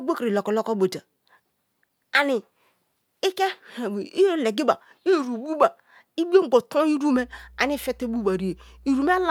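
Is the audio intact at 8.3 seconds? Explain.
No. At 8.3 seconds the speech carries mains hum. It starts at 7.13 s and runs to the end of the clip at 9.30 s. A ground loop or a nearby transformer has let the 60 Hz power line leak into the signal path. The result is a steady, low buzzing tone under the speech, at around 25 dB below it. The tone doesn't change with what is being said, so it stays audible in the pauses.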